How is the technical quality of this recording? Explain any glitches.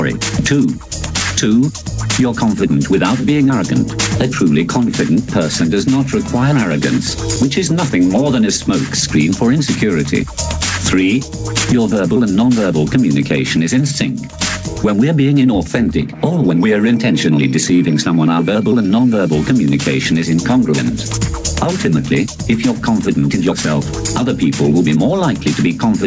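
The recording has one clear problem that persists from start to finish: gain pumping. The gain is likely set far too high for the microphone, so a fast limiter clamps down on every loud sound and releases in the gaps. The gain swings by something like 15 dB, leaving a squashed sound with little difference between loud and soft. The bandwidth stops at 8 kHz, which fits a G.722 call path.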